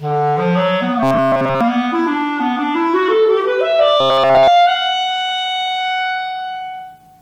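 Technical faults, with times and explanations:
1.03 to 1.61 s and 4.01 to 4.48 s, robotic sound from repeated short buffers: fresh audio likely stopped arriving, so roughly 7.5 ms chunks were looped almost entirely, forcing a rigid, metallic 134 Hz buzz.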